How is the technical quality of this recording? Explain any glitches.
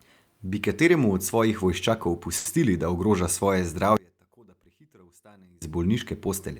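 Two glitches stand out in this speech recording.

From 2.37 to 2.47 s there is a short stall from a late packet. A packet arrived late, the playback buffer emptied, and the receiver held the last sound for about 80 ms instead of dropping anything, delaying everything after by 80 ms. It sounds like a brief smeared hold. A spectrogram shows flat, repeated horizontal bands.

From 3.97 to 5.62 s the level collapses by about 30 dB, leaving only a faint residue. The likely cause is one channel inverted: reversed polarity cancels the centred sound when left and right are summed to mono. The waveform shrinks sharply, and the spectrogram shows weak energy.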